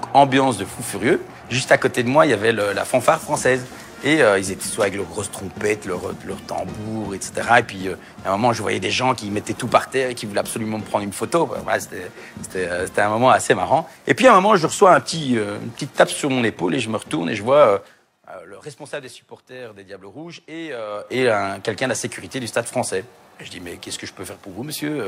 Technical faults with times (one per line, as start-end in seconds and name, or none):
17.72-18.10 zipper noise
20.86-21.22 zipper noise